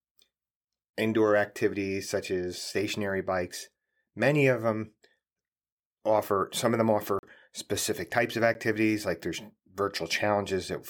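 At 7.19 s, and again at 8.54 s, the output buffer likely went unfilled and a block of digital silence was written in its place. It runs 40 ms after "offer some of them", heard as a short hole, and 10 ms after "specific types of", a tick.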